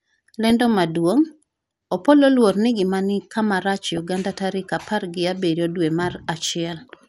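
Speech with a dull, gurgly, granular edge all the way through, likely MP2 compression at a low rate, something like 80 kbps, with upper bands dropping out. DAB burbling breaks in over it at 0.47–0.81 s, 2.33–2.50 s, 3.97 s and 5.88–5.93 s, where bit errors slip past error correction and put short blips of noise into single sub-bands.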